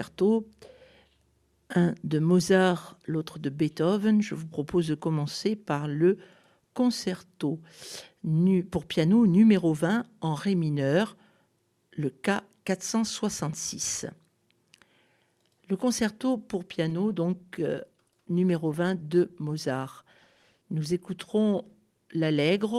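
At 16.91 s there's a call bitrate drop that runs almost to the end, until about 22.73 s. The sound suddenly gets coarser and rougher, and it stays that degraded for nearly six seconds without recovering. That points to the call's bandwidth estimate collapsing and the encoder being told to spend far fewer bits, which fits a fall from around 96 kbps to roughly 20 kbps.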